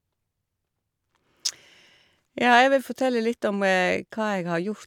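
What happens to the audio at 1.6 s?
At 1.6 s the audio is intact, with the speech continuing without any dropout, click, glitch or other fault.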